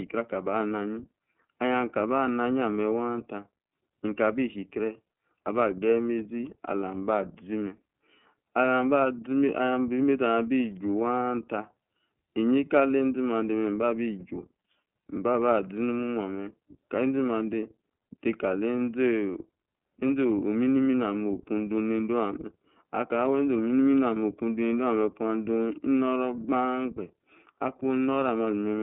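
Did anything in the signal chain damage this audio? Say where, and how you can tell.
Yes, the codec stage did. It's an iLBC codec artefact running right through the speech: nothing gets above about 3.7 kHz, the low end thins out near 150 Hz, and there's a plainly audible rough, slightly synthetic grain. iLBC codes each frame's excitation on its own, without leaning on the previous one, so small discontinuities build that buzzy texture. The frame rhythm points to 30 ms frames, which fits the 13.33 kbps mode.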